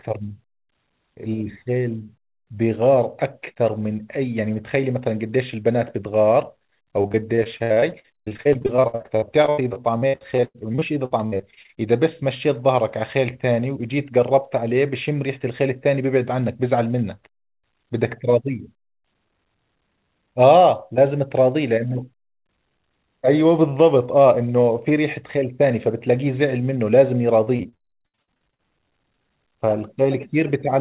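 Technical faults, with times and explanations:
7.02–11.74 s, repeated packet loss (robotic sound): choppy speech with pieces missing over this stretch. Dozens of short holes, the longest about 0.1 s, are each patched by stretching the last sound, covering roughly 30% of the span.
27.44–28.61 s, repeated packet loss (robotic sound): a shorter burst of the same chopping. Holes up to about 67 ms are concealed for roughly 40% of the span, within audio that carries nothing above 4 kHz.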